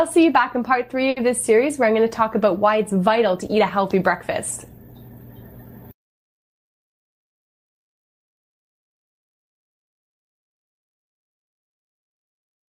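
A short stall from a late packet occurs between 1.09 and 1.19 s. One packet missed its playout deadline, the jitter buffer ran dry, and the receiver stretched the last stretch of sound for about 70 ms until the packet arrived, then carried on from the same point. Nothing is skipped, but the sound is held unnaturally long, with a faint buzzy or slightly dipped quality. Everything after it plays 70 ms later than before.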